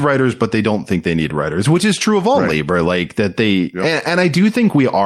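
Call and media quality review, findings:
No audible faults found in the speech; nothing to raise against any component on this call.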